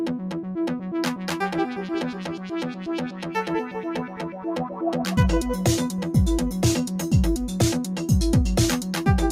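Right from the start there's a noise suppressor applied to music or sounds, a speech-tuned processor that's treating steady parts of the sound as noise. The level swings by around 10 dB as it clamps down and lets go, so held material pumps and thins.

It bites hardest in three spots where the sound gets cut by the noise suppressor: 2.13 to 2.52 s with a drop of about 7 dB, 3.1 to 3.29 s at about 7 dB, and 4.07 to 4.45 s at about 6 dB. Sustained bits sink there.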